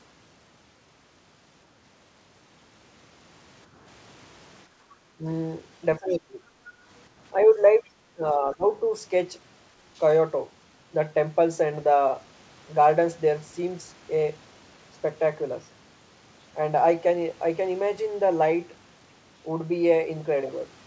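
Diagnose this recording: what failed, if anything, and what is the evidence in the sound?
Background gated by the echo canceller, a call-processing fault: the noise floor notches down about 8 dB at 4.67–4.9 s and about 7 dB at 6.68–6.85 s, as brief waveform dips.

The voice envelope sags about 10 dB at 5.18–5.26 s and 7.34–7.9 s, and about 20 dB at 5.99–6.4 s and 8.13–8.83 s. This is likely speech suppressed in double talk by the echo canceller. It shows as faded spectrogram stretches.

At 7.4–7.45 s a faint scrap of sound sits about 25 dB below the speech, a smear on the spectrogram. This is likely the other side's voice leaking through, left behind by the echo canceller.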